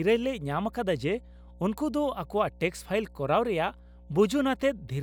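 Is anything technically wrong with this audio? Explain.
Yes. Mains hum runs through the whole speech recording: a steady 60 Hz tone about 20 dB below the speech, leaking in from the power line through a ground loop or nearby transformer. Unlike rumble, it holds one fixed pitch and never drifts.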